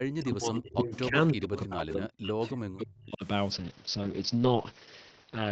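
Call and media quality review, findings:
Speech suppressed in double talk, 0 to 1.16 s and 1.34 to 3.24 s: voice dips up to about 40 dB. Likely the echo canceller ducking both sides during overlap.

Echo leak at 0.93 to 0.99 s, 1.28 to 1.33 s and 1.88 to 1.93 s: faint 309 ms delayed copy, about 15 to 25 dB down. Likely residual loudspeaker echo getting past the far-end canceller.

Call bitrate drop from 3.53 s to the end: Opus drops from 32 to 7 kbps and bandwidth from 8 kHz to 6 kHz, so the sound goes rough and muffled.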